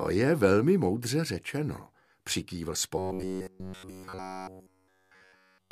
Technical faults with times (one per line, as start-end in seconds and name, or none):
2.98-5.71 robotic sound from repeated short buffers